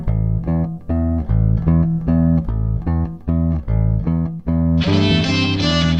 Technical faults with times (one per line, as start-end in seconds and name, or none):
1.22-6.00 adaptive stream at a lower bitrate